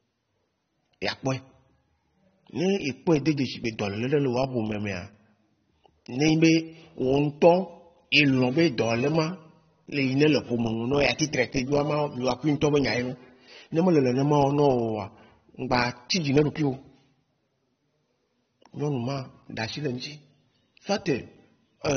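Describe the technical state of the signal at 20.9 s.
At 20.9 s you're hearing the same damage that runs through the whole clip, and it sounds like AAC compression is the likely cause. There's nothing above about 6.3 kHz, so the speech comes across dull, with that warbly, smeared texture on sustained sounds and sibilants. That points to a low bitrate, something around 24 kbps, where the encoder drops the top end and can't spend enough bits on the rest of the spectrum.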